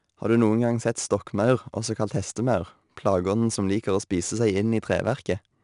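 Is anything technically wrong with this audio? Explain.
Yes. 4-bit ADPCM compression affects the whole speech clip. Coarse predicted steps leave a gritty hiss that follows loudness. Nothing is audible above 10.6 kHz.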